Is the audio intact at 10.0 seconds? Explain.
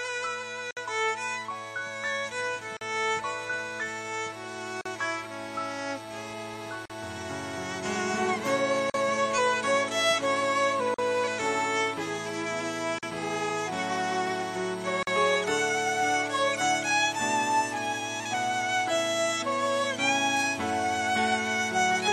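Yes, at 10.0 seconds the audio is intact, with no dropout, click, distortion or other disruption in the signal at that point.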